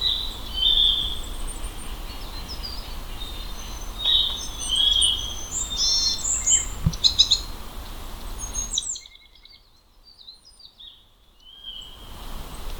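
Nothing technically wrong can be heard in the audio. The level rises and falls smoothly in the way a fader would move it, each change gliding evenly from one setting to the next.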